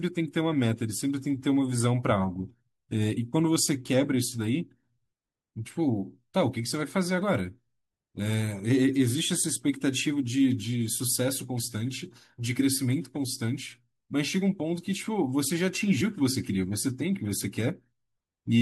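At 3.16 s and again at 7.2 s the speech is broken by short glitches, both from damaged data in the compressed stream. Bad bytes there throw the decoder off the frame, so it loses sync and has to hunt for the next header.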